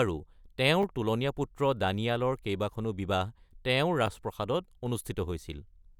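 At 0.82 s the speech jumbles briefly: chunks out of order. One 10 ms chunk arrived a chunk late and plays after its successor. Nothing is missing, but the swap leaves three hard joins, heard as a tiny garble. The same swap recurs at 4.06 s.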